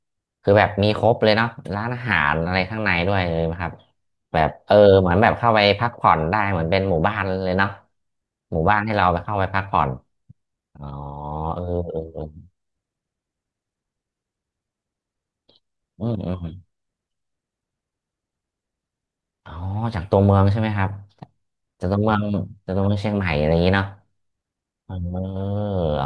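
No technical faults are audible.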